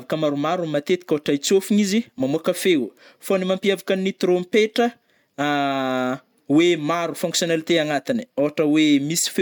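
No technical faults can be heard anywhere in the recording, with the signal holding steady and continuous throughout.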